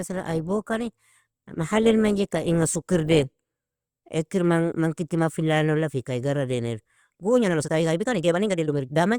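The player began on a low-bitrate rendition of an adaptive stream and only moved up once it had gauged the connection. From 0.0 to 4.0 s the speech sounds dull and artefact-laden, consistent with roughly 24 kbit/s Opus, then brightens abruptly, without a gap, to a cleaner quality that suggests about 64 kbit/s.

From 7.39 s to the end the pace suddenly jumps to about 1.65 times normal speed while the pitch holds steady, giving a rushed delivery. This is likely a time-stretched section, where software dropped short slices of audio to squeeze it into less time.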